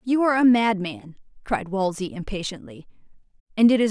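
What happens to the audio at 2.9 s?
Nothing goes wrong at 2.9 s; the speech carries on intact through that moment, with no dropout, click or distortion to be heard.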